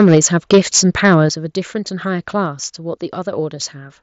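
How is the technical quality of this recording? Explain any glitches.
The recording has three kinds of glitch: clipping distortion early on, a few sudden level drops, and one brief dropout near the end, all over a wideband Bluetooth headset link that carries speech up to 8 kHz with a light grain on loud sounds.

Microphone overload runs from 0.00 to 0.26 s and again from 0.52 to 1.15 s. The peaks exceed full scale by about 3 dB and about 6 dB respectively. A few percent of samples are flattened, which gives the loudest syllables a harsh, crackling edge. The likely cause is an input gain set too high for the converter.

Microphone volume stepped down occurs at 0.15 s (about 2 dB), 1.29 s (about 8 dB) and 2.46 s (about 2 dB). Both voice and background fall in level at once. This is likely the call software lowering the device's input gain in one step after detecting clipping.

Concealed Bluetooth headset packet loss occurs at 3.61 s, where a single 7.5 ms frame went missing between headset and phone. 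The receiver filled the gap by repeating a closely matching slice of the preceding waveform, so it is nearly inaudible.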